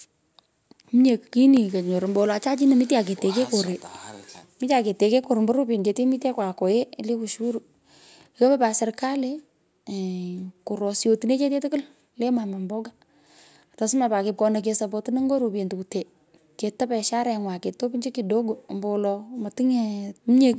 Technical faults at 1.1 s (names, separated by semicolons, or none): none